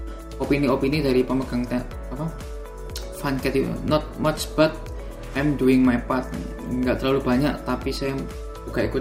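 No faults turn up anywhere in the recording, nothing that breaks, drops out or distorts.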